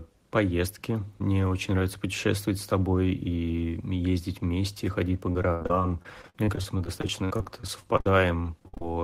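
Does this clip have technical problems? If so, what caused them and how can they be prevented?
Yes. Repeated packet loss (robotic sound) runs from 5.32 to 8.06 s, just after "вместе ходить по", and again from 8.43 to 8.85 s. Each short dropout, up to about 70 ms, is patched by extending the preceding sound, which leaves the speech choppy and robotic. A steadier network connection with a larger jitter buffer would prevent it.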